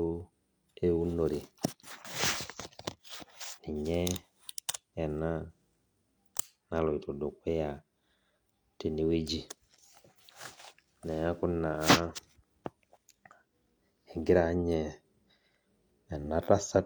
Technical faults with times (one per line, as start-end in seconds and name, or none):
1.90-3.80 channel delay (comb filtering)